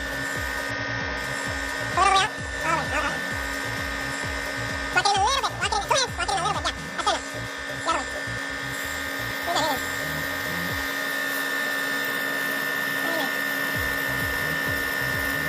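A short stutter at 0.70 s replays the same 93 ms slice twice more, and a briefer one at 12.26 s replays a 46 ms slice once. Both are repeated frames: a stretch of compressed data was delivered more than once, so the decoder played it again. The block lengths fit a two-frame and a one-frame repeat. The repeats add about 186 ms and 46 ms, making the audio that much longer than it should be.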